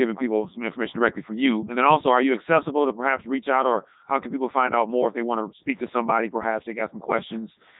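From start to finish the speech passes through a Codec 2 vocoder, and the damage is heavy: the voice sounds robotic and buzzy because the decoder rebuilds it from sine waves driven by pitch, voicing, energy and a coarse spectral envelope, so the original waveform is gone. The quality fits the 3.2 kbit/s mode. On a spectrogram the harmonics appear as unnaturally tidy stacked lines with nothing above 3.8 kHz, and the waveform's shape no longer matches real speech.

At 5.75 s, just after "if they want to", loose connector crackle runs until 5.99 s, about a quarter of a second. A worn or dirty contact making and breaking rapidly chops the signal, heard as an irregular burst of scratchy crackle over the vocoded speech. The spectrogram shows a cluster of thin vertical broadband streaks at uneven spacing. On the waveform, the signal is cut into fragments with abrupt edges.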